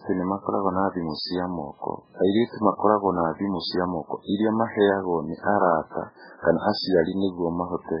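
Throughout the speech, heavy MP3 compression is the likely cause, starved enough to point to a bitrate near 8 kbps. Nothing survives above 5.3 kHz, and weak frequency lines flicker in and out between frames, leaving the sound dull, watery and swirling.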